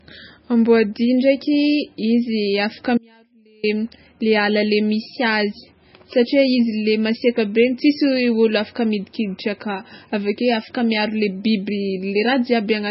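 Heavy MP3 compression, likely at a very low bitrate around 17 kbps, removes everything above 5.6 kHz, so the speech sounds dull and watery throughout. From 2.98 to 3.63 s, an audio dropout to a faint residue loses the signal for 0.66 s. Only a faint trace remains, roughly 35 dB down, before the speech abruptly returns.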